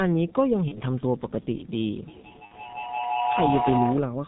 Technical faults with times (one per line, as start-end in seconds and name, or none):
0.00-4.28 G.723.1 codec
0.68-0.81 VoIP packet loss concealed by the speech codec
2.07-4.15 feedback howl
2.45-2.54 VoIP packet loss concealed by the speech codec